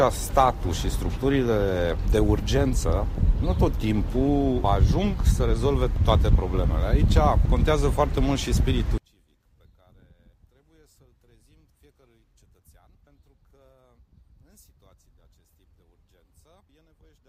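From 8.98 s to the end, the fault is most likely one channel inverted: one side of the stereo pair has its polarity flipped, so anything shared by both channels cancels once they are summed to mono. The level collapses by about 37 dB at that point, and the shared content all but disappears. What remains is only the small difference between the channels, a faint residue of the sound.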